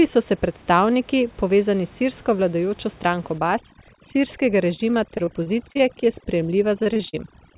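From 3.38 s to the end of the clip, an overdone noise removal stage clamps down on every frequency band near its noise estimate. The room noise, which sat about 25 dB below the speech, collapses into near silence with twinkling specks, while softer parts of the speech are removed along with it.

From 4.76 to 6.04 s, repeated packet loss leaves a string of short holes, the longest about 32 ms, each patched by stretching the previous sound. Roughly 13% of the stretch is concealed this way, so the speech turns choppy and robotic. A denser burst from 6.83 to 7.15 s, with gaps up to 39 ms, fills about 32% of that span with concealment. All of this sits inside the 4 kHz ceiling of the G.711 call path.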